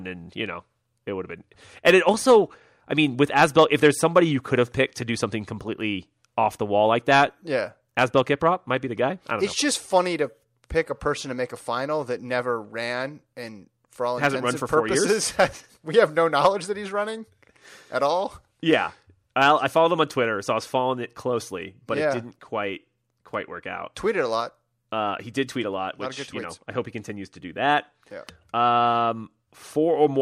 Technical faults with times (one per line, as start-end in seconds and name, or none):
none